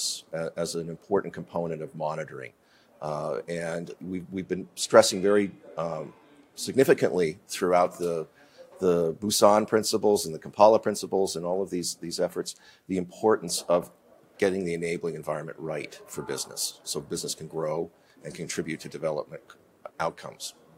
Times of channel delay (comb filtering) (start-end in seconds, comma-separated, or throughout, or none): 4.36-6.81